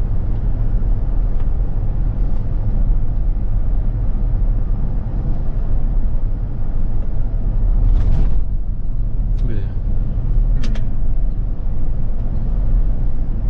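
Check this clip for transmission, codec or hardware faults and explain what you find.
One fault appears, from 2.70 to 2.75 s: damaged data in a compressed stream. Part of the encoded data there is corrupt. The decoder misreads those frames, loses sync and hunts for the next valid frame header. The result is a brief glitch lasting about 50 ms.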